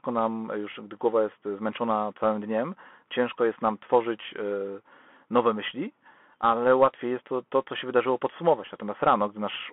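Throughout the speech, a Bluetooth CVSD headset codec squeezes the sound into a 250 Hz to 3.4 kHz line band. Its one-bit delta coding, fitting a 64 kbit/s link, leaves a granular hiss under the speech and scratchy s sounds, which plain telephone band-limiting would not add.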